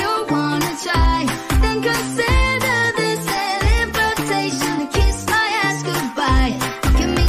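No technical faults can be heard anywhere in this audio.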